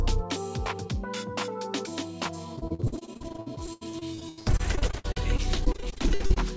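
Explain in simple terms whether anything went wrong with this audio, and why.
From about 2.56 s to 6.38 s the sound turns choppy and robotic, with tiny pieces dropping out over and over, more than fifty times, none longer than about 83 ms. This is repeated packet loss (robotic sound). During the call, small chunks of audio arrived late or never arrived, and the system patched each hole by stretching the last bit it had. About a third of that stretch is filler rather than real sound.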